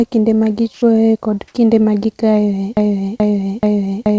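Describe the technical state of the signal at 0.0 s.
At 0.0 s the signal is intact, with no fault present at that moment.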